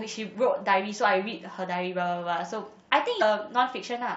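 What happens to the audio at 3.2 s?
At 3.18 to 3.22 s the speech is broken by damaged data in the compressed stream. Corrupted bytes make the decoder misread the frames there and lose sync until it finds the next valid frame header, producing a brief chirp, squawk, click or short hole lasting about 40 ms.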